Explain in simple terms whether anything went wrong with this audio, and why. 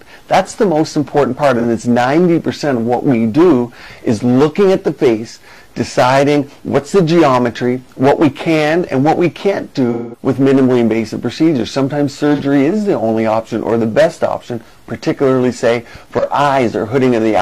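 Three brief patches sound smeared and noisy, as if the sound blurs for an instant: 1.59–1.64 s, 12.34–12.41 s and 16.19–16.24 s, each about 43 ms. A longer one at 9.91–10.22 s, about 0.2 s, fades toward silence and comes back. This is AAC frame loss with concealment. Pieces of the compressed stream went missing, and the player filled each gap by reusing the last good sound, letting it fade when the gap ran longer.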